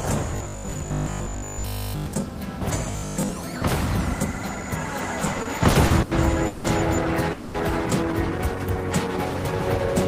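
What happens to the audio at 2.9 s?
From 2.91 to 3.29 s there is robotic sound from repeated short buffers: a rigid 50 Hz buzz, likely from a 20 ms chunk replayed through most of the span.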